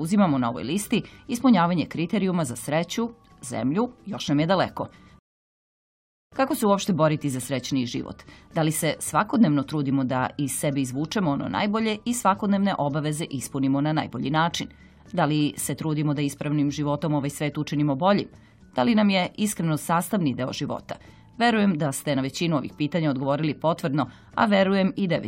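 At 5.19 s the audio drops to silence and resumes at 6.32 s, a rebuffering stall. Playback ran out of downloaded data and paused until more arrived, then picked up exactly where it stopped. Nothing is missing, but about 1.13 s of dead air is inserted.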